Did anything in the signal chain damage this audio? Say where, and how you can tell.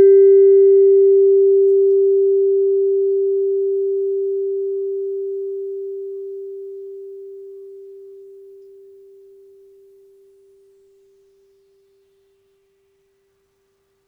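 No, nothing in the signal chain damaged this music. No stage of the chain has left a mark that can be heard anywhere in the recording.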